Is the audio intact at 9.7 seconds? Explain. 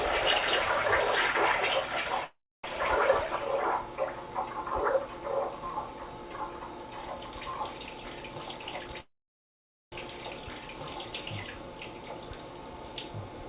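No. At 9.7 seconds the sound has stopped. From 9.00 to 9.94 s a call audio freeze holds it: a short continuation of the last sound dies away into roughly 830 ms of silence. When the sound resumes, it picks up exactly where it left off, so nothing is lost. The rest of the clip is pushed about 0.92 s later. This is likely caused by delayed packets draining the jitter buffer, which makes the receiver fill the wait itself.

The moment is also affected by a doubled audio track that runs through the whole clip. A second full-band copy sits roughly two seconds behind at about the same loudness, with no decay or room colour, so each sound returns as a dry, equally strong repeat. The likely cause is the audio being captured twice, once through a slower path. Both copies stop at nothing above 4 kHz, the narrowband limit of the call path, which fits G.711 mu-law.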